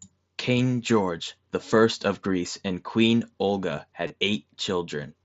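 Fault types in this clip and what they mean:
Concealed Bluetooth headset packet loss: Audio packets from the headset to the phone went missing near 4.07 s. About 30 ms of speech was lost, which fits four 7.5 ms mSBC frames. The receiver filled the gap by repeating the best-matching piece of the waveform just before it. This run sounds like a short buzzy tone held at full level. A slight warble follows as the real speech returns.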